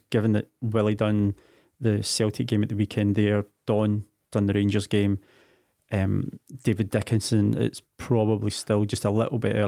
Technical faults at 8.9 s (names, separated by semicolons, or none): none